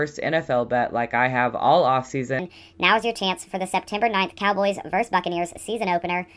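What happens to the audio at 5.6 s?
At 5.6 s the speech is still under a wrong sample rate fault that runs from 2.39 s to the end. It plays about 1.38 times too fast, as if 16 kHz material were run at 22 kHz, so it sounds hurried and about 5.5 semitones higher. Unlike a pitch shift or time-stretch, tempo and pitch rise together.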